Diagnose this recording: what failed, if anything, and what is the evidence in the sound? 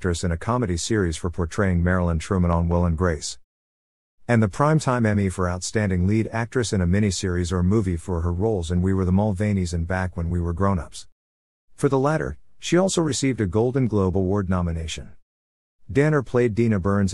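A loud pop at 2.53 to 2.74 s: two sharp pulses in quick succession, peaking a few dB above the surrounding audio, which carries on underneath. The likely cause is a voltage step in the analogue wiring, from a plug, switch or static discharge, shaped by downstream circuitry.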